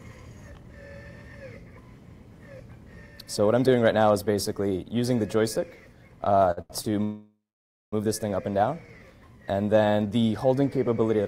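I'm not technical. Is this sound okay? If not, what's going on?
No. Three short stalls from a late packet come at 6.51, 6.61 and 6.82 seconds. Each time, a sound is held a little too long while the audio waits for late data.

Then a call audio freeze runs from 7.03 to 7.95 seconds. The last sound fades into about half a second of silence, likely because data was delayed on the network. Nothing is lost. The audio just resumes late.

From 8.51 to 9.00 seconds, a jitter buffer slow-down plays the audio at about 92% speed. The pitch stays the same, but it sounds stretched while the system rebuilds its reserve.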